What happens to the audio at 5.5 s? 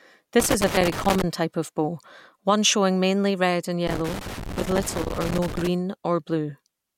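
At 5.5 s the speech is still inside a burst of loose connector crackle. It runs from about 3.87 s to 5.67 s, so this moment falls near its end. A worn or dirty contact is making and breaking as it shifts. Each break chops the signal for an instant. Any DC on the line turns those breaks into pops. The result is an irregular, scratchy crackle laid over the speech.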